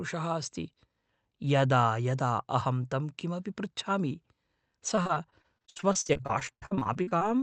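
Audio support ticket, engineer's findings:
Choppy, robotic speech from 4.95 s to 7.23 s. Repeated packet loss, roughly thirty short dropouts, longest about 58 ms. The jitter buffer keeps stretching the last bit of sound over each hole, and about 31% of that stretch is patched. The Opus call path sounds fine; top end stops around 8 kHz.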